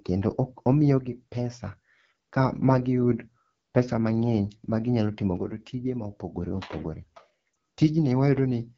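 The whole clip runs through the AMR wideband (HD Voice) codec, and it's rough and raspy all the way through, the kind of grain that fits the low 8.85 kbit/s mode. At that rate the pulse-driven model can't carry the speech cleanly, and the top band above 6.4 kHz is just shaped noise.

From 0.99 to 1.64 s, and again from 5.37 to 6.37 s, the level suddenly sags by about 6 dB and then snaps back. That's most likely one channel dropping out, so the mono sum loses half of what both sides shared.

At 7.53 s there's a quick dip or warble, what you'd expect from one lost AMR speech frame of about 20 ms. The decoder fills the gap by repeating its last good settings at reduced gain, and the voice comes back weak or rough for a moment.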